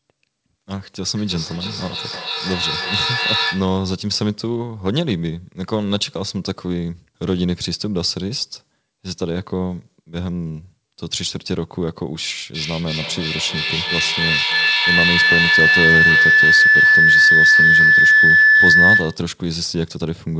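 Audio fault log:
1.16–3.82 s, feedback echo between two devices: each stretch of speech returns roughly every 300 ms, each pass thinner and more ringing, and the repeats stack up rather than dying away, peaking at about 1 dB above the direct speech. A second device in the same room is playing the call back into this microphone, and the echo canceller cannot remove sound it did not play itself, so the loop keeps recirculating.
12.54–19.32 s, feedback howl: a piercing, narrow tone around 2 kHz swells until it sits about 9 dB above the speech, with the loop coming round roughly every 300 ms, and it continues until the loop is broken. This is the same two-device loop, now gaining level on every round trip. The repeats grow instead of fading, and they narrow onto the frequency the loop favours. The howl stays below the 8 kHz ceiling that the call's wideband codec leaves in place.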